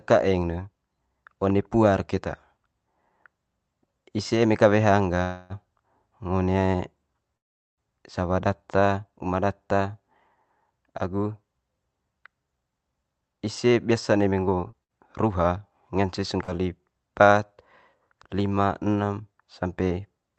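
Speech heard over a call link, with its top end cut off at about 8 kHz by the call codec. Two call audio freezes stop the speech in its tracks. At 5.23 to 5.53 s the last sound is held as a buzz that fades for about 264 ms. At 7.37 to 7.81 s the hold lasts about 404 ms, and almost all of it is silence. Then the speech picks up exactly where it stopped. Nothing is lost. The likely cause is delayed packets draining the jitter buffer, so each pause pushes the speech later.

Two jitter buffer speed-ups follow. From 12.53 to 14.93 s the speech runs at 112 percent with unchanged pitch. It sounds rushed, and about a third of a second is shaved off. From 18.10 to 19.21 s it runs at 109 percent, trimming about a tenth of a second. In both, the receiver is cutting tiny pitch-period slices to work off extra buffered delay.

Two short concealed packet losses sit at 14.71 to 14.76 s and 16.43 to 16.51 s. 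Each loses about 60 ms of speech. The gap is patched with roughly 19 ms and 41 ms of continued sound, heard as a quick smear or wobble. A short consonant can drop out entirely.

A burst of packet loss at 14.84 to 14.92 s removes 60 ms. The last sound is stretched into a fading buzz or hiss for 53 ms. Then the speech jumps ahead, and the missing piece is gone.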